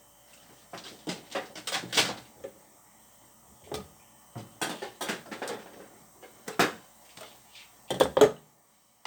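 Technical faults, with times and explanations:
No technical faults can be heard, so there are no times or explanations to give.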